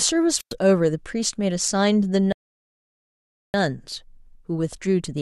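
At 0.36 s the wireless microphone's radio signal fades and the receiver's squelch closes: a wireless microphone squelch dropout, with rising hiss, about 105 ms of near silence, then speech returning by 0.54 s. At 2.32 s the player runs out of buffered audio, causing a rebuffering stall: the speech cuts to silence until 3.54 s, adding 1.2 s, then resumes exactly where it stopped.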